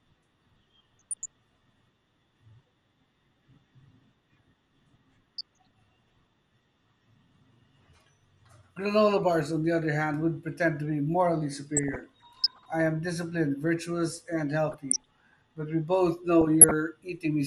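The whole speech clip has a dull, plainly gurgly, grainy quality: that's MP2 compression at work, likely at around 80 kbps. Layer II splits the audio into sub-bands and hands out bits, and at this rate the top bands get switched off or flicker while the rest are coarsely quantised, so you lose air and pick up that granular edge you know from low-rate digital radio.

On top of that there are five bursts of DAB burbling: 0.99 to 1.27 s, 5.38 to 6.10 s, 11.77 to 12.66 s (right after "pretend to be morally", clearing by "I am disciplined virtuous"), 14.70 to 15.09 s (just after "am disciplined virtuous and"), and 16.41 to 16.74 s (after "we both"). Bit errors at a fraction of a percent, roughly half a percent at worst, got past error correction and corrupted samples, putting short blips of noise into single sub-bands.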